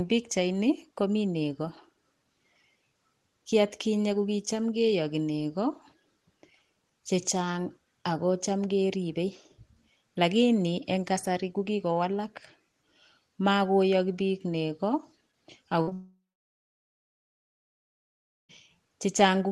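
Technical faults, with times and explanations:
15.81 to 15.89 s, burst of packet loss: the last sound is stretched into a short held buzz or hiss that fades. About 60 ms of audio never arrived in time, so the receiver continued the previous sound and turned it down before moving on.
15.89 to 15.93 s, short concealed packet loss: immediately after, there is a brief smear or wobble as the audio tries to recover. Another 20 ms or so was missing, so the receiver patched it by extending the last sound and blending it back into the real signal.
15.93 to 18.51 s, long network dropout: the sound decays into a fading tail, then goes silent for about 2.29 s before speech resumes. This is likely a network outage: roughly 2.56 s of audio was lost, the receiver's concealment faded out, and playback continued from later material.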